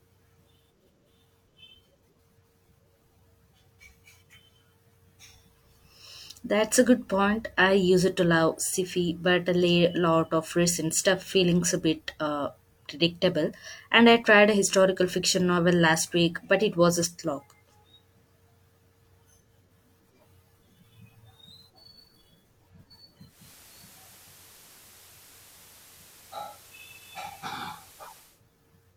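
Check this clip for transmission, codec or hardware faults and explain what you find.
One transmission fault is present. From 23.25 to 28.43 s, digital radio blending to analogue: the receiver cross-fades over 256 ms to FM, so hiss rises roughly 25 dB below the speech, and level drops about 2 dB. The quarter-second fade distinguishes it from a plain filter or noise burst.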